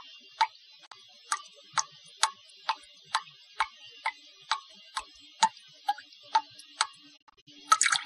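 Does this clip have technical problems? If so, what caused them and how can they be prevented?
Yes. A digital broadcast dropout mutes the sound from 0.85 to 0.93 s, and again from 7.16 to 7.49 s as several short holes of up to 48 ms each. Each mute uses a quick 20 ms fade, not a glitch or repeat, so the missing audio is simply lost. Better reception and antenna placement would prevent it.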